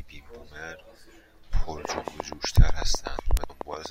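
A train of clicks runs from 1.85 s to 3.87 s: around twenty near-identical pulses at a steady 8.1 per second, peaking about 10 dB above the speech and ticking through the pauses too. The likely cause is interference from nearby equipment or a faulty connection or power supply.

A bit error spike lands at 2.56 s and another at 3.37 s, spanning three and two samples. A flipped bit makes the sample value leap by a power of two and snap back, leaving a single sharp, broadband tick unrelated to the speech.

Compressed frames are skipped at 3.49 s: about three frames, roughly 70 ms of audio, never play. The 23.2 ms spacing fits 1024-sample frames at 44.1 kHz.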